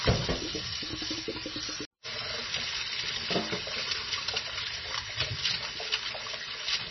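An everyday sound recording that has likely been squeezed through heavy MP3 compression at a very low bitrate, around 23 kbps. The encoder discards everything above 5.9 kHz and drops weak spectral detail, so the whole clip sounds dull, watery and swirly, with smeared attacks throughout.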